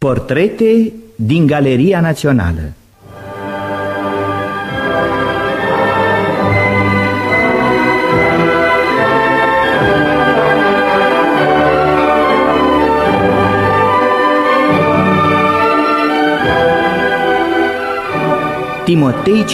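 No technical faults can be heard anywhere in this clip.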